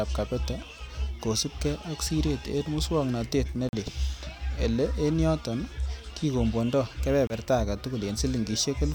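At 3.69 to 3.74 s and again at 7.27 to 7.34 s, the speech briefly cuts to silence, then resumes further along as if it had kept playing. This is likely a Bluetooth dropout, with packets missing the headphones' deadline. Waveform and spectrogram show sharp-edged, empty vertical gaps.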